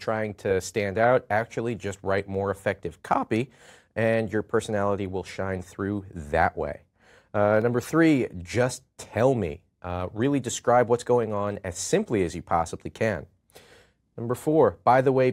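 A block of digital silence at 7.62 s, a 0.67 ms run of zeros that fits a 32-sample block, cuts the audio abruptly and is heard as a brief tick or dip.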